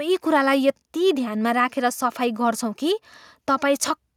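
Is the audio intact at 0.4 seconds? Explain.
Yes, at 0.4 seconds the speech plays through intact, with no dropout, click, distortion or other fault audible at that moment.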